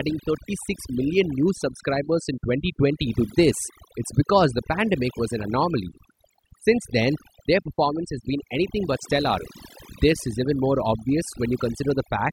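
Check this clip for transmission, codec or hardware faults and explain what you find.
The clip has one fault, present for its whole length: overdone noise removal. Between phrases the background drops and breaks up into twinkling specks. A noise reduction stage was set too aggressively. Any frequency band whose level sits close to the tool's estimate of the noise is pulled down hard or shut off entirely. This strips out the noise but also the quieter parts of the speech. Isolated bands flicker on and off, which produces the sparkling residue.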